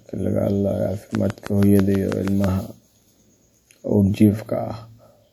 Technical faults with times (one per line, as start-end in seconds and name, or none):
1.15-2.45 train of clicks